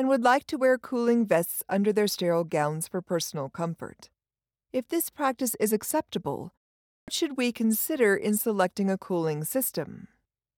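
At 7.0 s the output device, having gone idle during the half-second pause after "this practice is acceptable", takes about 78 ms to wake, giving a clipped start after a pause: "should we consider in" bursts abruptly out of silence, missing its opening sounds.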